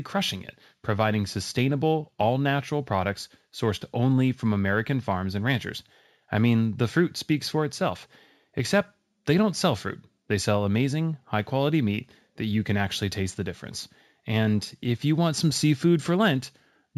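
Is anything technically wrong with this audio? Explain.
Yes. Throughout the speech, imaging from linear upsampling: raising 16 kHz to 44.1 kHz by straight-line interpolation softens the top and leaves a faint mirrored spectrum from 8 to 16 kHz, roughly 30 dB down, visible on a spectrogram and heard as metallic shimmer on sibilants.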